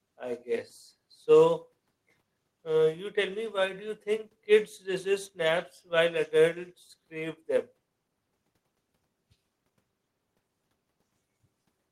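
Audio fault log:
No audible faults detected.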